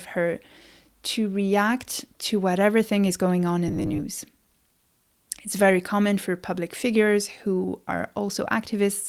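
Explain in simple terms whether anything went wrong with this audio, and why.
Something did go wrong, in three related ways. There is clock drift between sender and receiver throughout the clip. The sending side's audio clock runs about one and a half percent slow. So the receiving side keeps running short of fresh sound and has to cover the gaps.

To cover them, it makes repeated timing corrections from 0.22 s to 7.99 s. It repeats tiny slices of sound, so the speech plays at 98 percent speed. Altogether roughly 150 ms gets added. You may hear slight hiccups or an uneven pace.

From 3.68 s to 4.03 s the speech turns into a rigid, metallic buzz at 100 Hz. This is robotic sound from repeated short buffers. The likely cause is the same slice, about 10 ms long, being replayed while real sound was skipped. Around 40 percent of that stretch is repeats.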